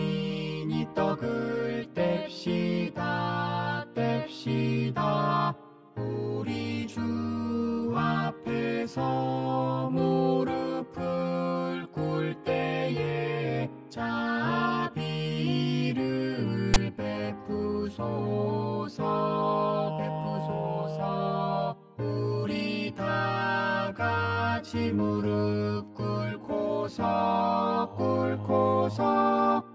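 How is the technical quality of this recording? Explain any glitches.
The recording has one clear glitch. File tags played as audio, 16.74 to 16.76 s: a block of text metadata was decoded as samples, giving a brief, loud, one-sided rasp with abrupt edges.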